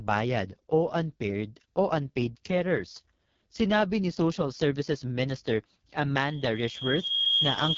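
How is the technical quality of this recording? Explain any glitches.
Technical quality is poor: the speech has a heavy codec sound from start to finish, and a feedback squeal takes over at the end.

The whole clip carries AMR wideband (HD Voice) codec damage. The speech comes out rough and raspy, which fits the lowest AMR-WB rate, around 6.6 kbit/s, where the vocal-tract model gets very few bits. Nothing is audible above 7.5 kHz.

From 6.19 s to the end at 7.77 s there's a loudspeaker feedback squeal. The mic is hearing its own speaker, and the loop gain tops one at 3.3 kHz, so that tone swells over roughly a second until it sits around 10 dB above the speech.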